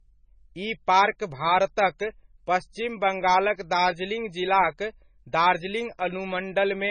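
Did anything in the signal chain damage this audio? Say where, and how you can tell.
Yes, at the codec stage, throughout the speech. Nothing is present above about 9.3 kHz from start to finish, and the smeared, swirly coding artefacts of a very low-bitrate encode run through the whole clip, pointing to something around 18 kbit/s MP3. This is likely low-bitrate audio saved at a high bitrate: the first encode removed the detail, and re-saving at a rate like 256 kbit/s couldn't restore it. A plain low-pass filter would leave a clean band without these artefacts.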